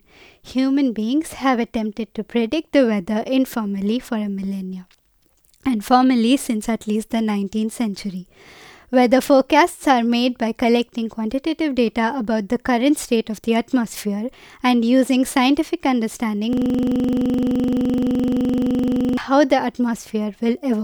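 At 16.53 s the speech gets stuck in a system hang loop until 19.17 s. The machine froze while the audio hardware kept replaying one 42.67 ms slice of its ring buffer, which fits a 2048-sample buffer. At 23.4 Hz it's a rough, stuttering buzz.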